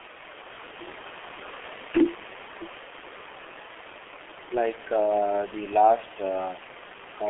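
From start to finish the speech sounds muffled and hoarse, with smeared consonants and nothing below 300 Hz or above 3.4 kHz. That is heavy G.723.1 codec damage: coarse 30 ms frames and a slow-moving voice model, fitting a rate near 6 kbit/s.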